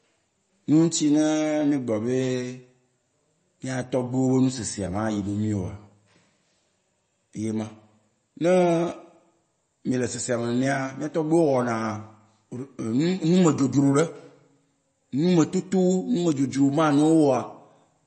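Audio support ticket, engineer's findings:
Watery, swirly speech throughout, with metallic chirps on s sounds and smeared consonant attacks. Likely MP3 compression at a bitrate fitting roughly 32 kbps: treble cut hard at 8.3 kHz, weak bands dropping in and out per frame. Spectrogram: flat ceiling at 8.3 kHz, flickering holes below.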